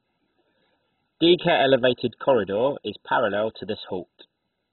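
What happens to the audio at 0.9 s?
At 0.9 s the speech sounds dull and muffled, with nothing above about 4.1 kHz, and carries a gurgling, granular roughness. This persists throughout the clip rather than starting there. The likely cause is heavy MP2 compression at a very low bitrate, in the region of 16 kbps. Starved of bits, the encoder shuts off its upper sub-bands entirely, switches bands on and off so they flicker, and quantises the remaining ones coarsely.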